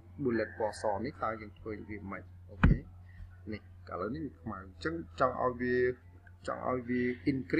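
From 4.01 s to 6.02 s the sound drops in pitch and slows down at the same moment. The shift is about 114 cents, a little more than a semitone flat, and playback runs 6.35 percent slow. At 6.02 s it snaps back to normal. This is a drift correction step. The likely cause is clock-matching software changing the playback rate in one jump to rebalance its buffer. Sustained tones make the detuning easiest to hear.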